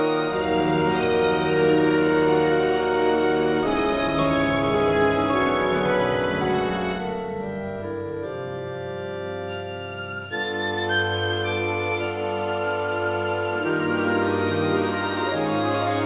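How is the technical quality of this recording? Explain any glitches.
No glitches can be heard.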